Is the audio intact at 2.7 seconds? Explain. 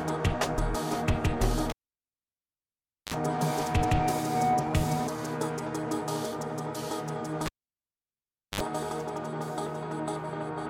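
No. A cable pulled and plugged in runs from 1.70 to 3.14 s, so 2.7 s falls inside it. A live lead is yanked out, giving a pop at 1.70 s and about 1.39 s of near silence. As the plug goes back in, only its tip touches at first, letting a roughly 50 ms burst of 50 Hz mains buzz through before full contact restores the audio with a second pop.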